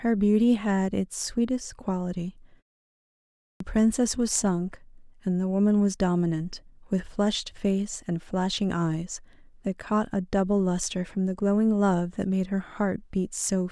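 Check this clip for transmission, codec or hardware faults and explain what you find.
One hardware-side fault stands out: a clipped start after a pause at 3.44 to 3.60 s. After roughly a second of silence, the output device appears to have dropped into a low-power or unlocked state and needed time to wake and resynchronise before it passed audio again. The first 164 ms of the returning speech never reaches the output, so the onset is missing and the sound snaps in abruptly from silence, already mid-attack.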